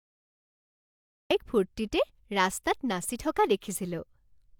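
The recording began late, a cut-off start: silence runs to 1.31 s, then the speech enters mid-sound with no natural attack or fade.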